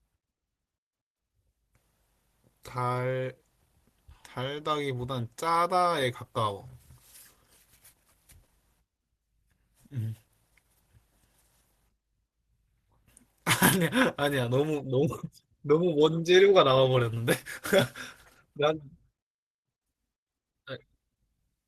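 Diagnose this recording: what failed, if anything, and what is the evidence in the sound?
Nothing in the signal chain failed: the speech keeps a continuous level and steady timing throughout, with no audible break, distortion or instability at any stage.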